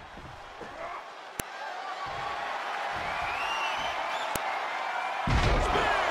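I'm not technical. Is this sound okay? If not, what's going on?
No. There are two sharp clicks, at 1.40 and 4.36 seconds. This is a file header played as audio: joined pieces kept their start-of-file data, which plays as noise.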